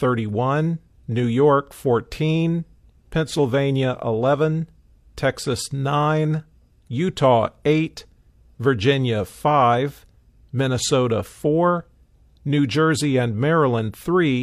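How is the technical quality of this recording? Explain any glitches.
Nothing in the recording stood out as a technical problem on listening.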